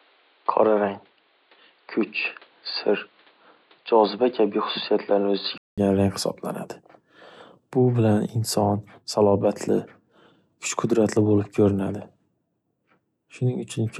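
Input switched to a poorer device, 0 to 5.78 s: the speech sounds dull and boxy, with nothing above 4.8 kHz and a faint noise floor about 35 dB down. A 200 ms gap at 5.78 s precedes clearer sound at similar level, likely the recording leaving a narrow-band input.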